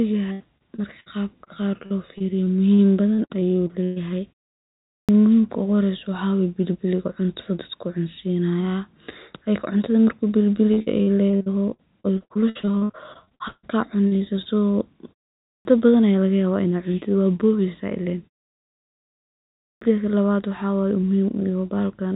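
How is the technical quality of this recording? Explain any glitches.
The recording is speech heard through a narrowband call path, probably G.711 mu-law at 64 kbps with nothing above 4 kHz. It has three kinds of glitch.

Repeated packet loss (robotic sound) occurs from 0.32 to 1.08 s, just before "qab qar", then 1.86 to 3.98 s, then 10.74 to 13.65 s. Lost packets are patched by repeating the last sound, up to 151 ms per gap, which gives a choppy stutter with pieces missing.

Short concealed packet loss appears at 1.44 s and 14.42 s. Each is a single patched gap of about 20 to 40 ms, heard as a brief smear or wobble rather than a sustained robotic stretch.

A clipped start after a pause occurs at 4.93 s, 15.51 s before "aaa lagayabah in ad", and 19.67 s. The sleeping output device swallows about 140 to 160 ms, so the sound begins abruptly. Unlike packet loss, nothing is smeared; the onset is simply missing.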